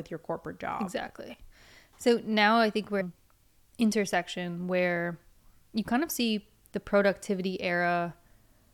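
Damaged data in a compressed stream appears in this speech clip from 3.00 to 3.02 s, just after "now I think we're", as a brief glitch about 20 ms long. A short stretch of the encoded bitstream there is corrupt, so the decoder cannot interpret those frames correctly. It loses its place in the stream, and resumes normal playback once it locks onto the next valid frame header.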